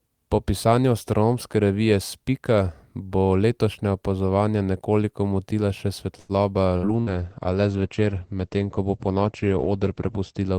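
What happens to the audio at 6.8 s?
A burst of packet loss hits the speech from 6.77 to 6.86 s. Several packets arrived too late or not at all. The receiver stretched the last sound for about 57 ms, fading it into a brief buzz or hiss. About 60 ms of speech is simply gone.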